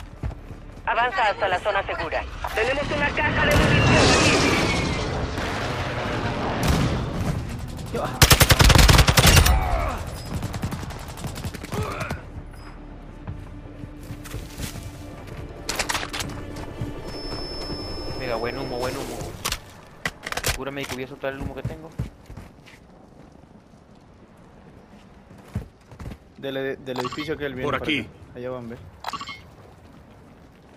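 From 16.99 to 19.04 s a thin, steady whistle near 5.3 kHz sits faintly behind the sound, roughly 15 dB down and swelling and fading slowly in level. This feedback whistle likely comes from a loudspeaker-to-microphone loop held just at the edge of feedback, sustaining one tone without building.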